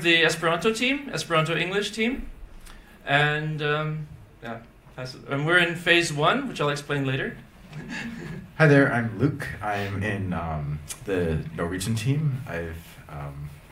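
Nothing stood out on listening to this audio.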